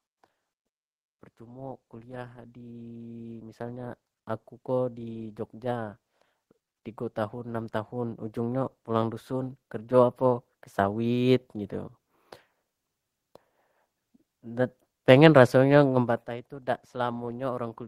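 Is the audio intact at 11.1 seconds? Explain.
No. From 7.14 to 11.42 s, automatic gain rising: the gain control judged the input too quiet and lifted it about 8 dB, so speech and background swell together.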